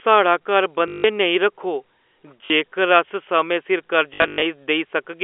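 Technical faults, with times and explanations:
0.88 to 1.04 s, packet loss with last packet repeated: about 160 ms is lost and the last chunk loops. This fits 20 ms packets, so you get a roughly 50 Hz robotic buzz.
2.46 to 2.5 s, packet loss with last packet repeated: a 40 ms gap, heard as a quick stutter.
4.14 to 4.42 s, packet loss with last packet repeated: 200 ms lost, scattered over 280 ms, with the longest run about 100 ms. It comes across as a choppy buzz sitting on top of the narrow telephone band.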